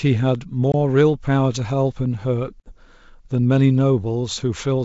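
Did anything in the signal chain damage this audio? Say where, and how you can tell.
Yes, packet loss on an ADPCM call in the network stage: sharp-edged silent holes at 0.72–0.75 s (about one 20 ms packet) and 2.60–2.74 s (about three, 60 ms), each followed by slightly distorted speech while the desynchronised G.722 predictor recovers.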